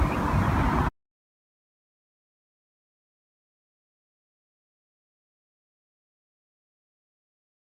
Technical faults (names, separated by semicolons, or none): none